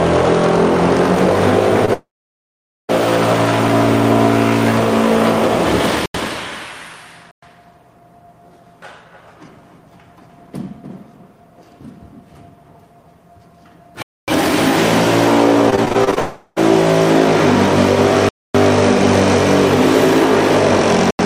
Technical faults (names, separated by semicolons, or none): short concealed packet loss; long network dropout; block of digital silence; repeated packet loss (robotic sound)